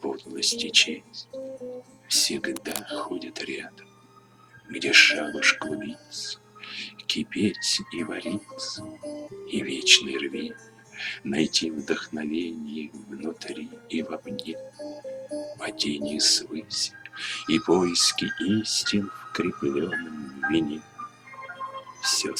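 From 2.56 to 2.81 s, a quarter-second burst of cable scratch noise sits over the sound as a harsh, uneven rustle, roughly 10 dB below the signal. The likely cause is a worn cable, plug or control being moved, so that its contact resistance jumps about rapidly. On a spectrogram it appears as a dense, broadband smear of vertical streaks across that span. The waveform shows jagged, irregular spikes riding on top of the signal.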